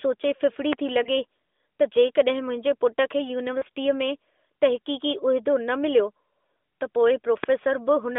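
A sudden voltage spike, likely from a plug, switch or static discharge, enters the signal between 0.73 and 0.75 s and produces a single loud pop, roughly 15 dB above the speech, which carries on underneath. The same kind of loud pop returns at 7.44 to 7.46 s, stronger at around 20 dB over the speech. Both are sharp, isolated clicks rather than a pair.

Radio errors corrupt speech frames on the mobile link, and the decoder, which sounds like narrowband AMR at a rate fitting 12.2 kbps with the line held to roughly 300 Hz to 3.6 kHz, fills the gaps by repeating its last good pitch and vocal tract settings at falling gain. These lost AMR speech frames appear first at 1.04 to 1.09 s, a 20 ms gap that points to one lost frame and is heard as a brief dip and warble. At 3.58 to 3.64 s the gap lasts 40 ms, which fits two lost frames. There the sound smears and sags before the speech recovers.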